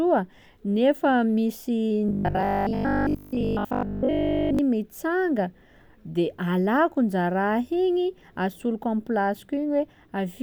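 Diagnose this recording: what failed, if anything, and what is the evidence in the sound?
Driver or buffer stage, 2.09 to 4.59 s: robotic sound from repeated short buffers, a metallic 50 Hz buzz likely from a 20 ms block looping. Unlike mains hum, it follows the words.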